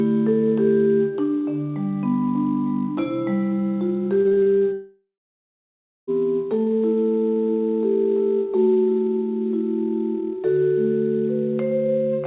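Repeated packet loss (robotic sound) runs from 4.22 to 4.64 s. Over that span, five separate gaps open in the incoming audio, the longest lasting 30 ms. Each is patched by stretching the sound just before it, so about 35% of the stretch, roughly 145 ms in total, is filled in rather than real. The result is choppy and robotic, with small pieces missing in quick succession.

From 4.73 to 6.10 s the audio breaks off entirely, most likely a long network dropout. The last sound is drawn out and fades over the first few tenths of a second, then about 0.98 s of silence follows. When the audio resumes at 6.10 s, it picks up further along, and the missing 1.35 s never returns. The whole clip has nothing above 4 kHz, which fits a G.711 mu-law call path at 64 kbps.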